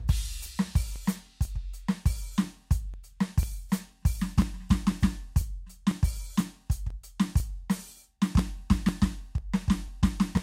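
Periodic USB or driver dropouts run through this music from 0.46 to 10.37 s: every 0.496 s a few milliseconds of audio are skipped, giving regular ticks.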